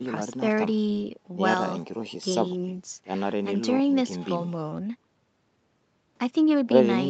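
No technical faults can be heard at any point in this speech, so there is nothing to describe in time order.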